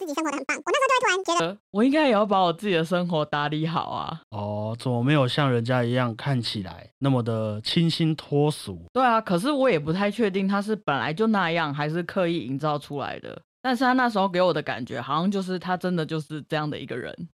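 From the start of the clip to about 1.4 s, the audio is read two samples at a time (double speed): the playback path treats each pair of samples as a single frame, as if the stream were stereo or had samples twice as wide. The speech therefore runs at 2.0 times normal speed and sounds an octave higher, chipmunk-like and hurried.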